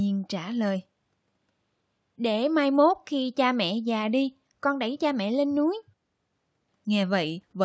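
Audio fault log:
No faults can be heard in this speech recording. It carries the sound of call microphone processing, with the lowest bass trimmed away and nothing above 8 kHz.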